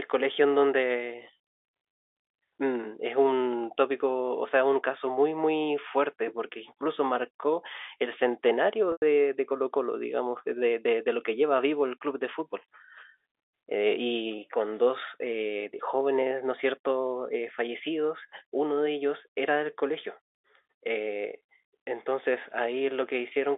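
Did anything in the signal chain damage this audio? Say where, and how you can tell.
Yes, packet loss with pitch repetition at the network stage, 8.92 to 9.02 s: about 100 ms goes missing, consistent with roughly five 20 ms packets. The receiver loops the last pitch period, giving a brief buzzy hold that fades to silence before sound cross-fades back. A plain dropout or buffer underrun would cut abruptly instead.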